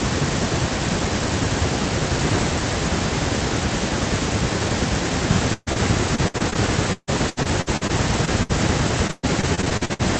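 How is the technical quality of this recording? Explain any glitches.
The second half of this speech clip has real trouble from lost packets. The call audio itself carries the usual codec texture and tops out around 8 kHz.

At 5.53 to 5.69 s there's a burst of packet loss. About 140 ms never arrived in time, so the receiver kept stretching the last sound and fading it down, even dropping to silence for about 40 ms. Then the speech picks up further along with that chunk gone.

Right after, at 5.73 to 5.78 s, comes a short concealed packet loss. About 40 ms went missing and got patched by extending the previous sound before blending back in. You hear a quick smear or wobble, and a short consonant there could easily disappear.

Then there's repeated packet loss, the robotic-sounding kind, in three stretches: 6.16 to 6.57 s (5 gaps, longest 59 ms), 6.93 to 8.51 s (8 gaps, longest 147 ms), and 9.07 to 10.01 s (10 gaps, longest 120 ms). 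Each hole gets papered over just before the next one hits, so roughly a third of each stretch is filler. That's what gives it the choppy, chunks-missing sound.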